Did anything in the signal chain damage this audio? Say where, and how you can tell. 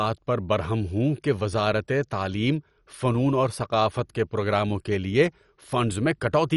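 Yes, the damage sits at the codec stage, and it runs through the whole speech clip. The sound is dull and carries a gurgling, granular distortion from start to finish. Nothing is heard above about 11.3 kHz. The likely cause is MP2 compression at a low bitrate, around 48 kbps. Layer II splits the signal into 32 sub-bands and shares out bits. With too few, the top bands are dropped, and the rest are coarsely quantised, which gives that grainy texture.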